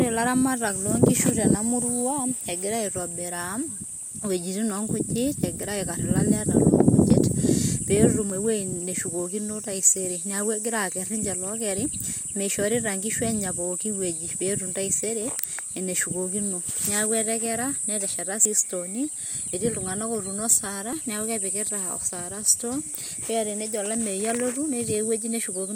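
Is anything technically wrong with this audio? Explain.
Yes, there are two faults.

Switching supply whistle runs through the whole clip. A switching power supply in the chain is cycling at an audible rate, and its output leaks into the audio as a thin high whistle. The tone sits around 8.3 to 8.6 kHz, sliding within that band rather than holding one pitch, at roughly 20 dB below the speech.

At 7.10, 8.30, 18.45, 19.48 and 20.93 s the speech jumps, most likely from a dropped buffer (overrun). The software failed to read incoming samples before the hardware overwrote them, so a chunk vanished and the audio on either side was spliced together. No gap is heard; the sound skips ahead. Most skips lose about 20 ms, the one at 20.93 s closer to 40 ms and the one at 18.45 s around 70 ms.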